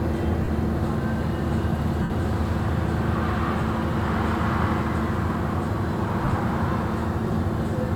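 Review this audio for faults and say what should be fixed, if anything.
Lost LE Audio frames cause three dropouts, at 0.44 to 0.48 s, 2.02 to 2.10 s and 6.25 to 6.32 s. Each gap is concealed rather than silent. The decoder repeats the last spectrum with random signs, so tones smear into noise. The first gap spans 37.5 ms, and the second 75 ms. The third loses 37.5 ms in short bursts scattered over 60 ms. To prevent this, strengthen the Bluetooth link and allow retransmission headroom.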